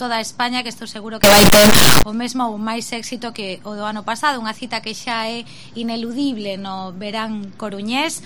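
From 1.24 to 2.03 s the sound becomes a loud, harsh, near-square buzz at an almost fixed, high level, likely float read as integer: 32-bit float samples decoded as integers.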